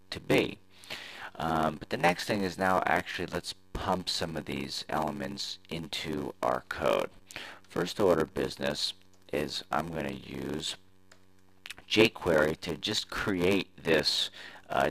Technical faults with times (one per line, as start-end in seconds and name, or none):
0.00-14.91 block size mismatch (padded)